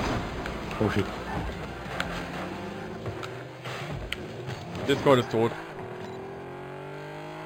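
Throughout the clip there is imaging from linear upsampling: the sound was raised from 11 kHz to 44.1 kHz by joining samples with straight lines. The top is dulled, and a mirrored copy, about 25 dB down, sits between 5.5 and 11 kHz, adding faint metallic shimmer. A clean low-pass would leave only dullness.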